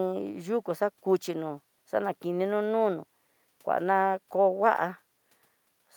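Nothing in the recording stood out as a technical problem on listening.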